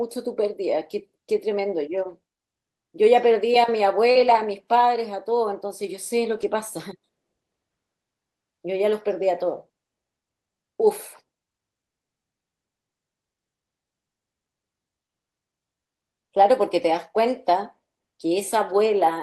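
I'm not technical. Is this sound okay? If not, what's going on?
No, there are two related glitches in this speech, both caused by bits of the call going missing on their way across the network.

Short concealed packet loss, at 4.11 to 4.17 s: about 40 ms of sound never arrived in time. To cover the hole, the receiving end kept the last bit of voice going, copying its pitch or hissing where there wasn't one, then slid back into the real audio. You hear a quick smear or wobble there, and a short consonant may have been swallowed.

Lost packet rebuilt from error correction, at 4.15 to 4.45 s, 6.37 to 6.43 s, and 16.67 s: here the missing pieces were patched from a rough backup copy carried inside the next piece of the stream. So nothing drops out, but those stretches, about 160 ms, 40 ms and 20 ms long, sound grainier and noisier than the audio around them. The first one runs straight on from the 4.1 s glitch, so that whole moment sounds rough.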